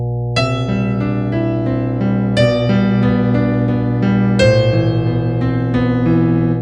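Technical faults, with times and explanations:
Throughout, mains hum: a steady low tone at 60 Hz sits under the whole clip, with some low harmonics above it, and it is strong, only about 5 dB below the wanted signal. Power-line current has coupled into the signal path, through a ground loop between pieces of equipment or through the field of a nearby transformer. Because the mains frequency never changes, the hum stays fixed in pitch and level while the sound above it changes.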